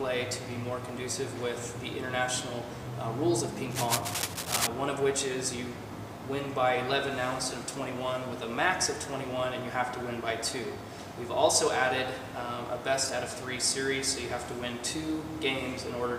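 At 3.72 s a burst of cable scratch noise kicks in and runs to 4.67 s, dense, uneven scratching roughly as loud as the sound itself. It's likely a worn lead or connector being moved, its contact resistance jumping around.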